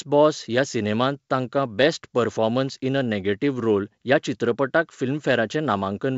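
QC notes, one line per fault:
Nothing stood out on listening to this speech, which comes through the G.722 wideband telephone coding at 64 kbit/s.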